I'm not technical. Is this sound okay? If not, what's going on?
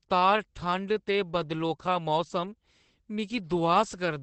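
No. The whole clip has Opus voice compression damage. The speech sounds muffled, because nothing above about 8.6 kHz survives. It is also slightly hoarse and robotic, since the codec squeezed it hard to save data, coding it roughly in small chunks.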